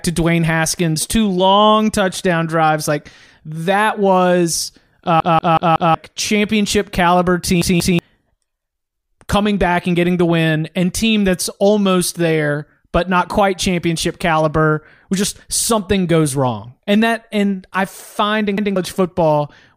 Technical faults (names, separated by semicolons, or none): repeated buffer